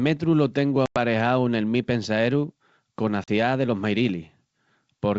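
Packet loss on an ADPCM call strikes twice in this speech clip. At 0.86 to 0.98 s, after "lo tengu" and before "nel mi", about 100 ms of a handful of packets vanishes. At 3.24 to 3.29 s a couple more go, about 40 ms. Silence fills each gap, and the G.722 decoder's predictor and step size lose track of the sender's. Each cut is a hard-edged hole, and the speech resumes with brief, slight distortion.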